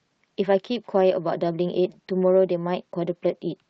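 Nothing faulty can be heard in this speech.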